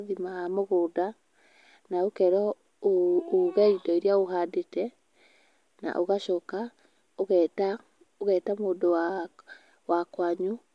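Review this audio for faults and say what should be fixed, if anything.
No faults turn up in the audio, so nothing needs to be fixed.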